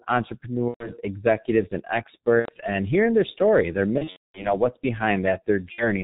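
The whole speech clip runs through the G.723.1 codec, and it's heavily damaged. Nothing above 4 kHz survives, so the speech sounds muffled and hoarse with smeared consonants. The coarse, slow-updating voice model fits the low 6.3 kbit/s mode.

VoIP packet loss concealed by the speech codec hits four times. The first is 0.68–0.90 s, just before "executives and". The second is 2.39–2.52 s, between "executives and" and "and hearing their story". The worst is 3.98–4.55 s, after "hearing their story their", where a gap of about 240 ms sits inside scattered losses. The last is 5.72–5.85 s. Each time, the decoder stretches the last sound into a fading buzzy tone or coloured noise, and the voice stays weak briefly afterward.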